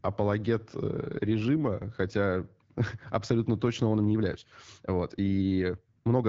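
From 0.92 to 2.55 s there is an AMR rate drop. The speech turns rougher and more synthetic, consistent with a step from 12.65 to 8.85 kbit/s.

From 3.91 s to the end, the speech suddenly runs 1.6 times faster at unchanged pitch. It sounds rushed, likely a time-stretched section.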